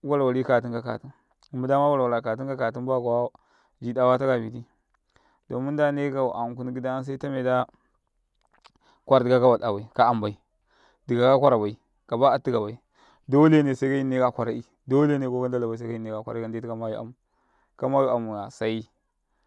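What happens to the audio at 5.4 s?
Nothing goes wrong at 5.4 s: the speech runs on intact through that moment, with no dropout, click or other fault.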